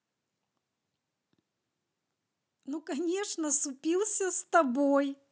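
From 2.65 to 4.83 s, automatic gain rising lifts the level by about 7 dB. The gain control judged the input too quiet, so speech and background swell together.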